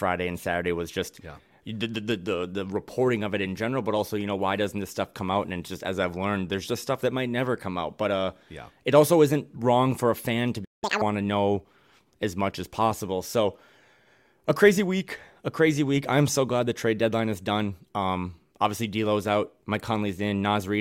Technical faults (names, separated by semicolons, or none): playback stall; catch-up at higher speed